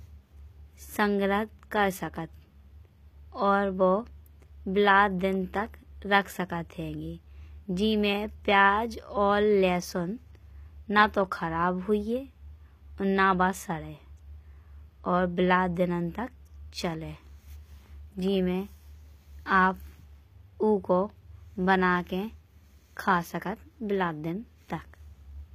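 Speech, and HE-AAC compression damage is plainly audible throughout. The upper spectrum does not sound like the original treble. It has been synthesised from copied lower bands, so sibilants come out gritty and metallic, with harmonics that fail to line up above the crossover. Nothing reaches past 15.5 kHz. The likely cause is HE-AAC v2 encoding at a low bitrate, consistent with roughly 24 kbps, relying on spectral band replication for the treble.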